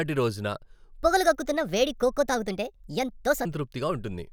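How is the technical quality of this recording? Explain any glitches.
The recording has one clear glitch: a section at the wrong speed from 1.03 to 3.45 s. Across that stretch the speech runs about 1.34 times faster than it was recorded, most likely because that portion was played or resampled against the wrong clock. Because speed and pitch move together, the voice jumps up by roughly five semitones and sounds hurried and chipmunk-like, then drops back to its normal pace and pitch at 3.45 s.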